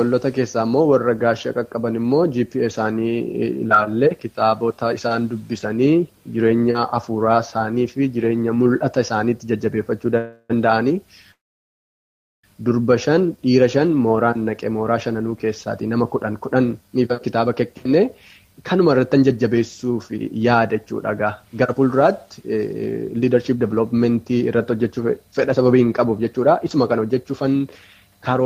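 At 10.17 s a call audio freeze begins and lasts about 0.34 s, to 10.51 s. The preceding sound is stretched into a fading buzz for roughly 0.32 s, with only a brief 30 ms of silence before the audio resumes. The likely cause is packets stalling in transit until the jitter buffer emptied. A second, longer freeze runs from 11.31 s to 12.45 s, filling 1.12 s, of which 1.07 s decays to silence. In both cases the audio resumes where it stopped, so nothing is lost, but the playout delay grows by the length of each gap.

Just after this, from 13.10 s to 13.38 s, a jitter buffer slow-down plays the audio at 88% speed with unchanged pitch. About 42 ms of repeated pitch periods and pause fragments are inserted to rebuild the buffer reserve, which drags the sound out slightly.

Jitter buffer speed-up follows in three stretches. From 15.87 s to 20.87 s the audio runs at 107% speed, with roughly 0.4 s trimmed out. 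From 21.43 s to 22.55 s it runs at 106%, with only a small amount removed. From 23.15 s to the end it runs at 109%, with roughly half a second cut. In each case short pitch-period segments are dropped to work off the accumulated delay, so the pitch stays the same but the sound is noticeably hurried.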